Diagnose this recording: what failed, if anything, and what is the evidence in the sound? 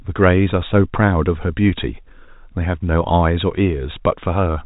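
Nothing in the recording has failed at any stage. The speech carries the band limit of G.711 telephone coding, with nothing above about 3.8 kHz, which is normal for that telephone path.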